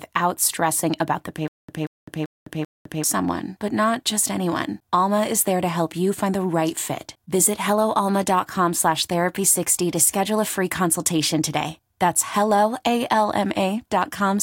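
Stutter with silent gaps from 1.48 to 3.04 s, just after "stressing about the": a burst of about 183 ms repeats four times, each followed by roughly 207 ms of dead silence, a steady 389 ms cycle. This is likely a stalled stream replaying its last fragment, so the audio before "someone but not just" is lost.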